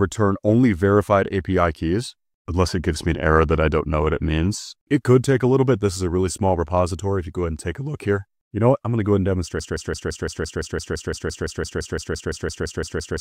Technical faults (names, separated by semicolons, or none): broken-record loop